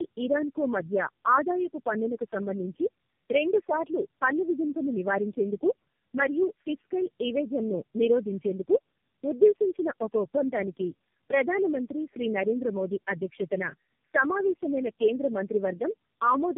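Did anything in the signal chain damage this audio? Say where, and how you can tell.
Yes. At the codec stage, the speech went through tandem speech coding for the whole clip, being decoded and re-encoded across what sounds like about four low-rate speech codecs in a row. Each pass degrades the last one's output, so the speech is rough, muffled and warbly, with nothing above 3.3 kHz.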